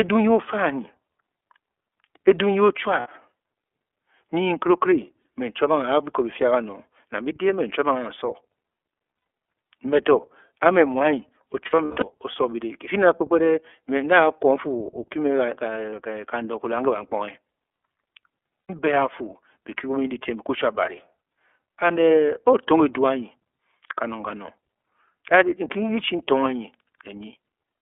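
Speech carried through the iLBC codec at narrowband telephone bandwidth, with a line band of 300 Hz to 3.4 kHz, consistent with its 13.33 kbps, 30 ms frame mode. The codec rebuilds each frame's excitation independently and keeps nothing above 4 kHz. The result is plainly audible codec damage: a dull, band-limited voice with a rough, slightly synthetic edge throughout. On top of that, lost iLBC frames occur six times. Packets dropped and the decoder filled each gap by repeating the last pitch cycle blended with noise. This is heard as a short held, buzzy or breathy vowel at 3.0–3.07 s (60 ms), 5.22–5.25 s, 9.17–9.26 s (90 ms), 15.90–15.93 s and 18.67–18.70 s (90 ms). The worst stretch is 11.66–12.04 s, where about 240 ms of losses are scattered over 360 ms, with the longest run near a tenth of a second. Because each iLBC frame stands alone, the voice snaps back cleanly right after every gap.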